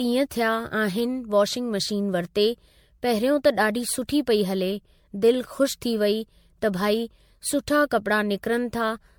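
Throughout the clip, generation loss: swirly, hollow, smeared speech with blurred attacks, likely from around seven MP3 re-encodes, which fits a 96 kbit/s chain.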